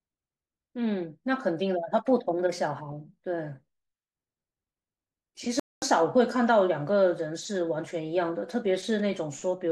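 A playback stall occurs from 5.60 to 5.82 s, where the speech cuts out mid-flow and the output falls silent for about 226 ms before resuming. The likely cause is the player running short of buffered data, or its playback thread being held up, so nothing reached the output until it caught up again. To the ear it is a sudden hole in the sound rather than a fade, followed by an abrupt restart.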